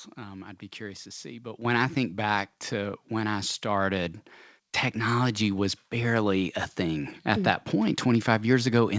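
At 1.65 s, just before "I think back", the microphone volume is stepped up. The call software evidently judged the input too quiet and raised the device's input volume in a single jump of about 8 dB. Because the change happens at the device input rather than in any later processing, the speech and the background noise floor rise together. Across the whole clip, the call path leaves nothing above 8 kHz, consistent with a G.722 wideband codec.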